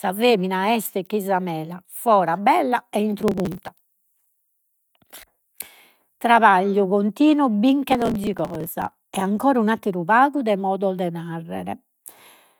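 Right after "mela fora bella e", 3.19 to 3.68 s, there's processor overload crackle: the processor keeps missing its deadlines on tiny buffers of a millisecond or two, skipping each one. It returns from 7.90 to 9.15 s after "trabagliu continu", gritty tearing until "ancora un’atteru pagu de".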